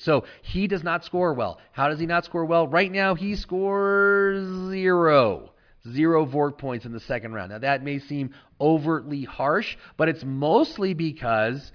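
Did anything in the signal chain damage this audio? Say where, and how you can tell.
No, nothing in the signal chain damaged this speech.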